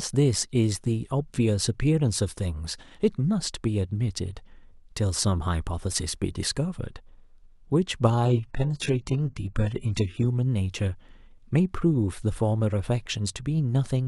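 From 8.25 to 10.25 s an adaptive stream at a lower bitrate takes over abruptly, with no gap. The speech turns thin, which fits a drop to very low-bitrate HE-AAC. A spectrogram shows everything above 11.1 kHz cut off cleanly, while the waveform runs unbroken.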